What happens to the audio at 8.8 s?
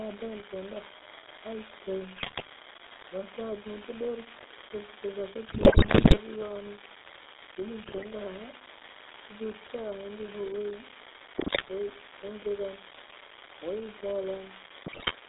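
At 8.8 s the speech carries two faults, both present from start to finish rather than confined to that moment.

The first is an unreliable data bit. One line in the sample path is marginal, so that bit flips in a random fraction of samples. Each flip adds a spike of identical size, which sounds like a constant crackle or fizz laid over the signal. It keeps going through the gaps between words, which shows it doesn't depend on the level of the speech.

The second is GSM full-rate codec damage, plainly audible here. The codec models the vocal tract and excites it with evenly spaced pulses, keeping only every third excitation sample, which fits the 13 kbps full-rate scheme. The result is a buzzy, gravelly roughness on the voice. The band is held to roughly 300 Hz to 3.7 kHz, so the sound is thin and lacks both low body and upper brightness.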